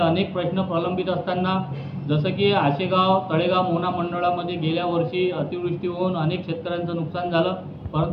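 No technical faults are audible.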